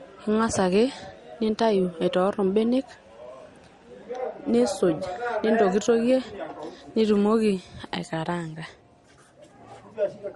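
Across the whole speech clip, the sound has nothing above 12 kHz, with two different sets of codec artefacts heard together. This points to transcoding between lossy codecs, likely an MP3 encode re-encoded to Opus, each at about 48 kbit/s, so the second codec spent its bits on the first codec's damage and added its own.

From 0.0 to 7.25 s a mains buzz sits underneath, faint at roughly 40 dB below the speech. Sharp switching spikes, twice per cycle of a 50 Hz supply, put harmonics into the signal. The result is a steady, raspy buzz that stops at 7.25 s.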